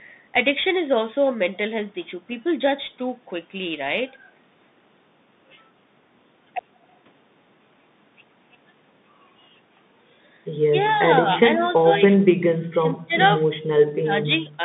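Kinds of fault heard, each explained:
Bluetooth CVSD headset codec: The speech sounds narrow and boxy, confined to roughly 150 Hz to 3.7 kHz, with a grainy hiss underneath and scratchy, distorted s sounds. The 64 kbps one-bit delta coder cannot adapt its step fast enough for loud, bright sounds.
Speech suppressed in double talk: The speech dips briefly at 10.9 s and 11.56 s. It falls away by about 35 dB from 11.83 to 13.15 s, drops deeply again at 13.92 s, and slightly at 14.29 s. This is likely an echo canceller ducking the talker while the far side spoke.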